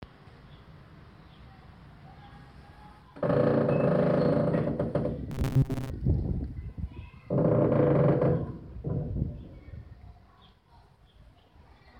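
From 5.31 to 5.91 s the audio collapses into robotic sound from repeated short buffers, a rigid metallic buzz at 134 Hz. The likely cause is starved playback looping a 7.5 ms buffer, with about half the real audio skipped.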